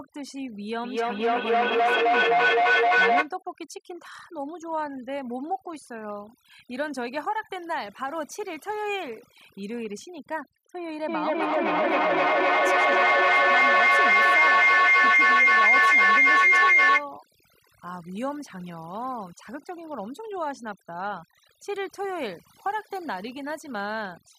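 Overdone noise removal runs through the whole clip: the noise reduction was set so strong that frequency bands near its noise estimate are pushed down or cut entirely, taking quiet parts of the speech with them. The background drops and breaks into twinkling specks.

Feedback echo between two devices appears from 0.84 to 3.32 s. A second device in the room replays what the other microphone sent, and that microphone captures it again, beyond the reach of either echo canceller. Repeats arrive roughly every 300 ms and pile up, peaking about 10 dB above the speech.

Feedback howl builds from 11.08 to 17.09 s. The loop from microphone to loudspeaker and back gains level on each trip, so the repeats grow instead of fading and narrow to a tone near 2 kHz, with the loop coming round roughly every 300 ms and the howl peaking about 12 dB above the speech.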